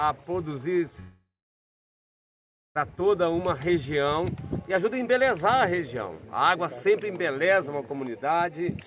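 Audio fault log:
1.0–2.77 s long network dropout: the sound smears into a fading buzz, then about 1.5 s of silence. Likely lost packets. The missing audio never returns.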